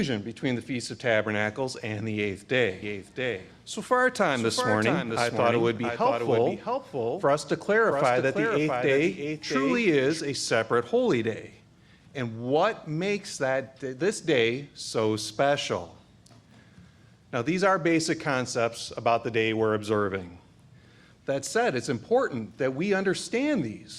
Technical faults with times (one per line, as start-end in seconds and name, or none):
2.82-10.20 doubled audio track